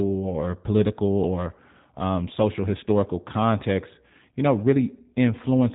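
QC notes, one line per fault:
throughout, G.729 codec: speech coded at a rate consistent with G.729A at 8 kbit/s rebuilds each short frame from a filter model, pitch guess and sparse pulses. Nothing above 3.8 kHz remains, so speech sounds muffled, buzzy and slightly synthetic.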